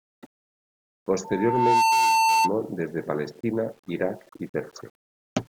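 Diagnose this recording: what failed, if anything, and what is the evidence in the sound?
Throughout the speech there is a grainy distortion that moves with the signal, sitting roughly 40 dB below it, with quiet passages turning gritty rather than hissy. The likely cause is a sample-format conversion to low bit depth without dither, with values rounded to 8 bits. Because nothing randomises the rounding, the error is correlated with the waveform, so it is heard as distortion tied to the sound instead of a steady noise floor.

A loudspeaker feedback squeal runs from 1.24 s to 2.52 s, a single tone at 895 Hz that swells over about 0.7 s and ends up roughly 5 dB above the speech. The failure is in the acoustic path outside the electronics: the microphone picked up the loudspeaker it was feeding, and at 895 Hz the loop gain exceeded one. That frequency built on itself until it dominated the signal, then stopped at 2.52 s.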